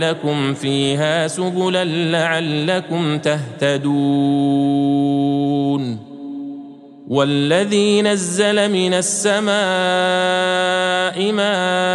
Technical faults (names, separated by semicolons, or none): none